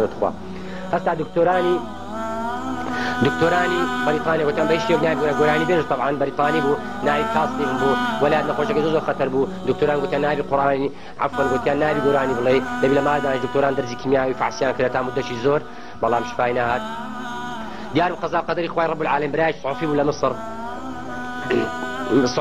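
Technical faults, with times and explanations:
No technical faults can be heard anywhere in this recording.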